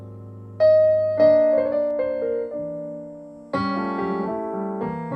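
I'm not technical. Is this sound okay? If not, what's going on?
No. From about 1.91 seconds to the end, de-emphasis was applied wrongly: a treble-cutting step meant to undo a boost was used on sound that never had that boost, or was used a second time. The high end is turned down, so the audio turns dull and muffled.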